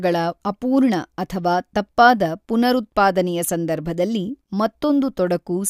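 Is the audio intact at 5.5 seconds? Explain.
Yes, the audio is intact at 5.5 seconds, with no fault present at that moment.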